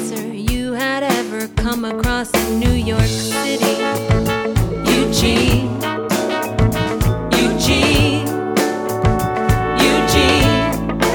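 A single sharp click at 4.76 s is the clip's one fault, and it is most likely dropped samples: a handful of samples, roughly a tenth of a millisecond, missing from the stream, so the waveform jumps straight to a later value. That step shows as one thin vertical line across the spectrum. Unlike a dropout, no stretch of the audio goes silent or is lost to the ear; only the abrupt discontinuity is heard.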